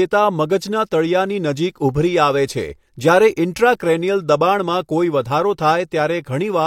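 No technical faults can be heard anywhere in the speech. Nothing in the audio points to a problem in how it was captured or passed along.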